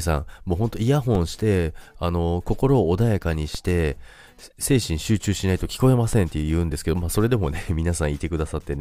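At 1.15, 3.55 and 6.13 s, DC steps shift the speech's zero line by about −17 dBFS, each decaying through a 20 Hz high-pass and heard as a low thump.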